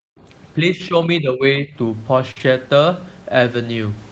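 This is speech over a call, with everything above 8 kHz gone from the Opus path. Right at the start, 0.0 to 0.2 s, the background is gated by the echo canceller, which clamped the mic down by about 40 dB while the far end was playing. From 0.58 to 1.75 s the voice dips by about 10 dB in patches, about 0.7 s in all, which is likely speech suppressed in double talk, with the canceller ducking the talker along with the echo. Then there's a burst of packet loss at 2.31 to 2.38 s, where about 45 ms is stretched out as a fading hold and about 40 ms of the original is simply skipped. Overlapping that, 2.36 to 2.42 s is a lost packet rebuilt from error correction, about 40 ms, which sounds like two packets, played from the low-bitrate backup copies, so it comes through rougher and noisier instead of dropping out.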